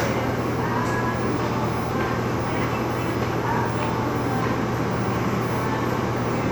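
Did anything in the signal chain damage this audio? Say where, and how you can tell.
No, nothing in the chain audibly damaged these sounds, and no stage from capture to playback left a mark I can point to.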